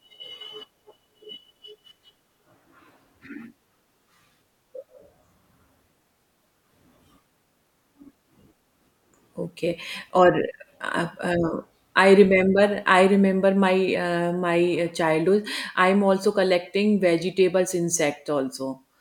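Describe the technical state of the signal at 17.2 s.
At 17.2 s the speech signal is intact, with no audible fault at that moment.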